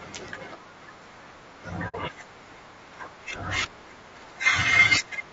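From the start the speech has a rough, grainy texture. The harmonics sound smeared, with hiss filling the gaps between them and a thin, synthetic-sounding top band. This plainly audible damage is likely low-delay AAC compression of the AAC-ELD kind, at a rate that fits about 32 kbps. Its short frames can't separate closely spaced pitch harmonics cleanly. On a spectrogram the harmonic stripes look blurred and sit on a noisy floor, and the upper band looks patchy.

From about 1.88 to 1.95 s the sound drops into a brief, soft-edged silence, which is AAC frame loss with muting. The decoder zeroed the missing spectrum, consistent with two lost frames, and the overlapping windows fade the signal down and back up. The waveform shows a short tapered gap where the amplitude falls to nothing. The spectrogram shows a narrow blank column across every frequency.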